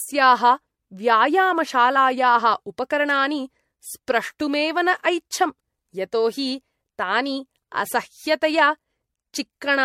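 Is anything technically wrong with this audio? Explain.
Yes. Throughout the speech there is generation loss: the sound is swirly, smeared and hollow beyond what a single lossy pass at this quality would produce, and consonant attacks are blurred. The likely cause is repeated MP3 decoding and re-encoding, around four passes at a rate that fits roughly 65 kbit/s. Each pass quantises again on a shifted frame grid, so noise and spectral holes build up.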